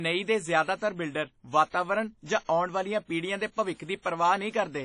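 Speech, smeared and ringing throughout, with a hiss that breathes with the sound. Nothing sounds above 10.1 kHz. This is likely WMA compression, consistent with a bitrate near 32 kbps.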